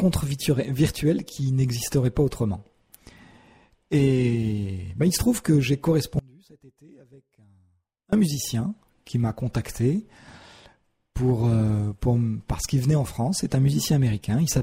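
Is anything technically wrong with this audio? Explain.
Yes. From 6.19 to 8.13 s there's an audio dropout to a faint residue. The sound abruptly falls to a faint leak around 30 dB down, likely from an upstream break.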